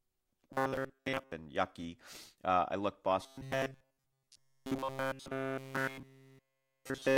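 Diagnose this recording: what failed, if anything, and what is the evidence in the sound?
Robotic sound from repeated short buffers, 0.53–1.32 s and 3.21 s onward: a rigid 134 Hz buzz, likely a starved buffer looping 7.5 ms chunks.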